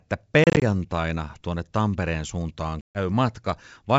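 Hard-edged silent holes break the speech from 0.44 to 0.62 s and from 2.81 to 2.99 s. This is packet loss on an ADPCM call, with roughly ten and then fifteen packets dropped.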